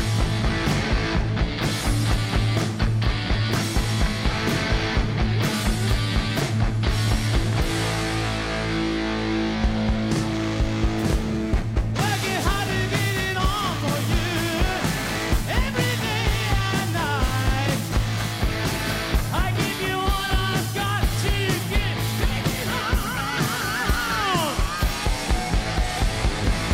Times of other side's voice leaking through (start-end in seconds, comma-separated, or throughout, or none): none